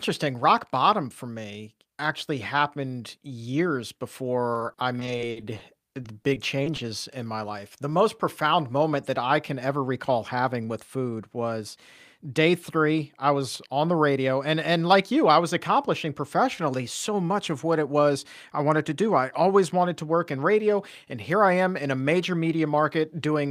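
Repeated packet loss (robotic sound) runs from 4.53 to 6.80 s, ending just before "in my life". The speech breaks up into a rapid series of short holes, none longer than about 50 ms, which points to around fifteen separate dropouts. About 320 ms of it is bridged by stretching the last good sound forward, giving a choppy, robotic texture, while roughly 240 ms simply vanishes, leaving pieces of the speech missing.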